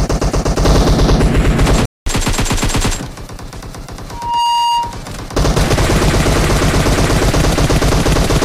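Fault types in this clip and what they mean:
Playback stall: The sound cuts out abruptly in mid-flow at 1.85 s and stays silent for about 0.21 s (209 ms) before resuming at 2.06 s. The gap is not a natural pause: there is no decay into it, just a sudden drop to nothing and an equally sudden return. The likely cause is the player's buffer running dry, or its playback thread being held up, so that no samples reached the output until it recovered.
Loudspeaker feedback squeal: From 4.12 s a single pure tone at 945 Hz rises out of the audio, swelling over roughly a third of a second into a steady ringing squeal that ends at 5.03 s. At its peak it sits at about the same level as the surrounding sound. A microphone was picking up the loudspeaker it feeds, and at 945 Hz the gain around that loop exceeded one, so the tone kept building itself up on each pass.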